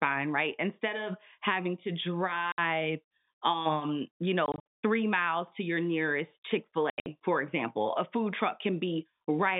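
The speech drops out into dead silence three times, with hard edges: at 2.52 to 2.58 s, at 4.46 to 4.64 s between "um you" and "three miles to your", and at 6.90 to 7.06 s just before "for example a food". The later two are broken clusters of 120 ms and 140 ms of gaps. This is packet loss filled with silence. Every hole is a multiple of 20 ms, which fits 20 ms packets, heard through a narrow G.711 telephone band.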